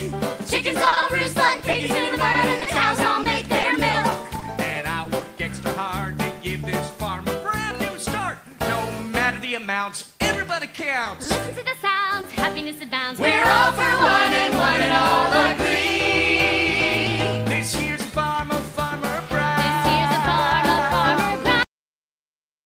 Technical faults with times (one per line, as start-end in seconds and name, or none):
0.85-4.43 repeated packet loss (robotic sound)
5.03-5.23 short concealed packet loss
10.75-11.07 short concealed packet loss
11.23-11.27 short stall from a late packet
12.21-12.25 short concealed packet loss
21.63-22.66 cut-off end